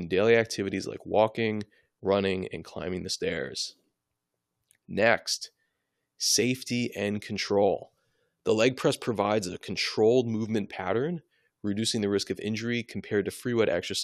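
No technical faults are audible.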